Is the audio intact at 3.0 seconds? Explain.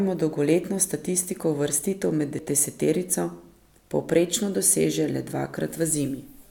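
Yes, at 3.0 seconds the speech is intact, with no dropout, click, distortion or other fault audible at that point.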